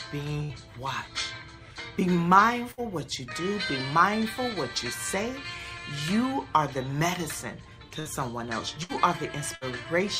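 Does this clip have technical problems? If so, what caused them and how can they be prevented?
Yes. Bursts of packet loss occur at 0.43–0.52 s, 2.71–2.80 s, 8.00–8.08 s, 8.83–8.92 s and 9.55–9.64 s. Each time, the receiver stretches the last sound into a fading tail of about 60 ms, then resumes with about 60 ms of audio skipped. A larger jitter buffer, forward error correction, or a more stable network path would prevent these gaps.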